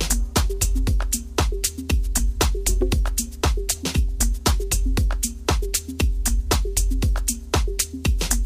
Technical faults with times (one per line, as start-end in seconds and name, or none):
0.00-8.46 video or display buzz